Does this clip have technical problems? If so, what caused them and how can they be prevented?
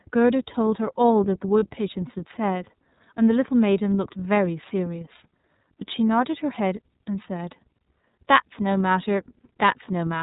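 Yes. The whole clip carries iLBC codec damage. This narrowband VoIP codec keeps nothing above 4 kHz, so the speech sounds dull and boxed in. Each frame's excitation is coded on its own. At this clip's setting the result is plainly rough and slightly synthetic, which fits iLBC's 30 ms frame mode at about 13 kbps. The texture stays constant from start to end. To prevent it, use a wideband codec such as Opus where the link allows.

There are also lost iLBC frames from 1.59 to 1.63 s. One 30 ms frame went missing. The decoder covered the hole by repeating the last pitch cycle blended with noise. That is heard as a brief held, faintly buzzy vowel where the speech should move on. The gap is short, so there is no fade. Since iLBC frames stand alone, the speech recovers almost at once. To prevent it, reduce packet loss with a steadier network, a jitter buffer, or forward error correction.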